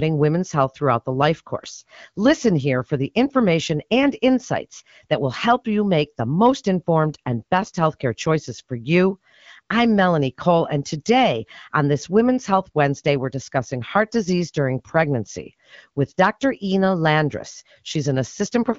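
Speech carried over the AMR wideband (HD Voice) codec at a quality that fits its 12.65 kbit/s mode, with nothing technically wrong to report.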